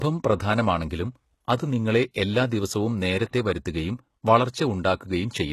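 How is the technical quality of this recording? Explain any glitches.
The recording's quality is held back by one problem that runs through the whole clip.

Throughout, this sounds like low-bitrate audio saved at a high bitrate. Nothing comes through above 12.3 kHz, and the speech still carries the artefacts of the first encoding. It's likely a very low-bitrate first encode later wrapped in a high-bitrate MP3, which can't bring back what was already stripped out.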